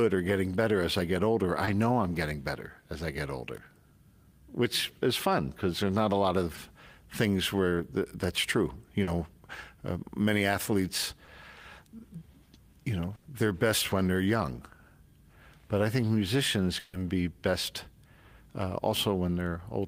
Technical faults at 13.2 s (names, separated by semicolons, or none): burst of packet loss